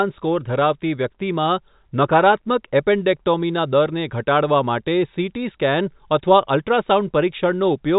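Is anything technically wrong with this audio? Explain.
No, nothing in this speech stood out as technically wrong on listening.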